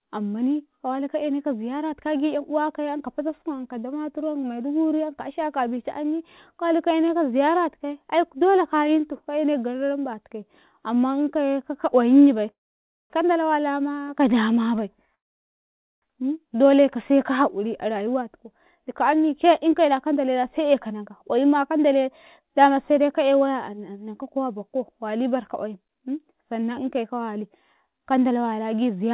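At 12.51 s the speech stops for about 0.6 s, with brief tail-off into silence, then resumes at 13.12 s. At 15.15 s a longer gap of about 0.87 s follows, nearly all silent, ending at 16.04 s. These are call audio freezes. Packets were likely delayed and the jitter buffer ran dry. Nothing is lost. The speech is pushed later instead.

From 17.64 s to 29.11 s the speech runs about 8% fast at unchanged pitch and sounds hurried. This is a jitter buffer speed-up. The receiver drained its excess delay by cutting tiny pitch-period slices, roughly a second in total. Throughout, the narrowband call codec leaves nothing above 4 kHz.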